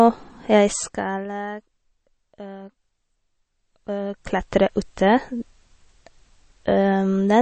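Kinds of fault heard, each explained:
MP3 compression: a likely cause of the watery, swirling speech and the treble cut hard at 8.3 kHz, which fits a low bitrate around 32 kbps; unlike plain low-pass filtering, weak detail flickers between frames.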